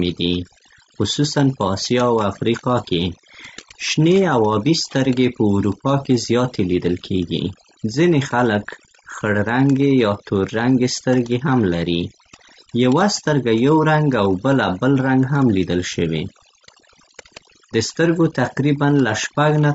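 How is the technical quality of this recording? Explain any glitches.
The technical quality is poor: two problems run through the whole recording, one from heavy processing and one from the encoding.

Overdone noise removal is present from start to finish. The noise reduction was set far too aggressively, so any frequency band that dips near its estimate of the background gets pulled down or switched off, taking the quieter parts of the speech with it. The gaps between phrases fall to near silence dotted with twinkling specks. What separates this from codec damage is that the artefacts sit mainly in the quiet moments and the decaying ends of sounds, appearing as isolated chirps rather than a constant grain.

The second fault is also continuous and plainly audible. The voice is rough and grainy, with noise filling in between the harmonics and a top band that sounds lowered or synthetic. 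The likely cause is low-delay AAC compression of the AAC-ELD kind used on video calls. Its short frames resolve pitch harmonics poorly, and the damage fits a low bitrate of around 32 kbps. Unlike the noise-removal specks, this roughness clings to the voiced sound itself.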